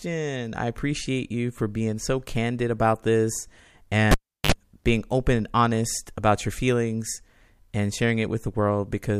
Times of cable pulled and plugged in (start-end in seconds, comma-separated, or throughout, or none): 4.11-4.52